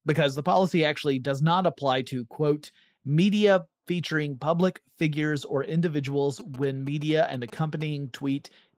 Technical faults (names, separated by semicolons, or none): GSM signalling bursts